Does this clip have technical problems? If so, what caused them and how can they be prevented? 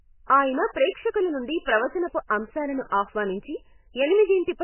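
Yes. Throughout the clip, likely MP3 compression at a very low bitrate, around 10 kbps, starved the encoder, so it dropped everything above 3 kHz and zeroed weaker frequency lines frame by frame, leaving the speech dull, muffled, watery and swirly, with smeared consonants. Encoding at a higher bitrate, or using a codec built for low-rate speech, would prevent it.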